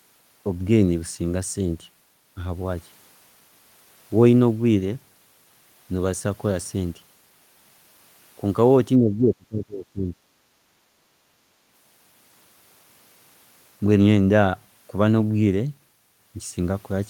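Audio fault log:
8.99 to 10.14 s, speech suppressed in double talk: The likely cause is an echo canceller that, with both ends talking at once, could not tell the near talker from the loudspeaker echo and pulled its gain down on everything. The speech dips hard, by about 30 dB at its deepest, for roughly a second of affected time within this span, before recovering.
10.42 to 11.08 s, background gated by the echo canceller: While the far end played through the loudspeaker, the canceller clamped the microphone path to keep echo out, taking the room sound with it. The background ambience sinks by about 7 dB at most for around 0.7 s, then comes back up once the canceller releases.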